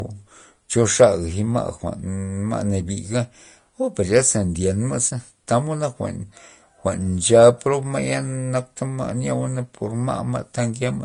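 From start to finish the speech stops dead at about 10.6 kHz, with the smeared, watery artefacts of heavy compression. A spectrogram shows a flat ceiling there across the whole clip. This is likely low-bitrate audio saved at a high bitrate: a high-rate MP3 cannot restore the detail an earlier low-bitrate encode discarded.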